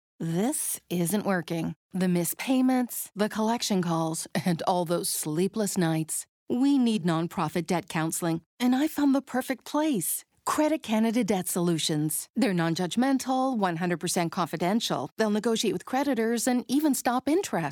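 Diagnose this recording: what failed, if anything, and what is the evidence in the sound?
Nothing in this speech recording points to a failure at any stage of the chain. There is no event in the sound to place in time or trace to a mechanism.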